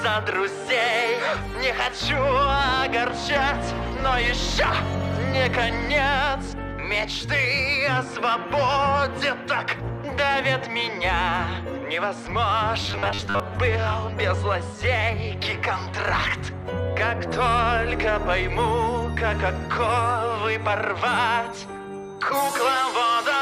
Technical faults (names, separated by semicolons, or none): robotic sound from repeated short buffers